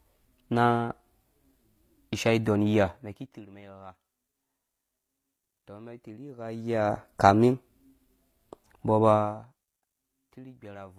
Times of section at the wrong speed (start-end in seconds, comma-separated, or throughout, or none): none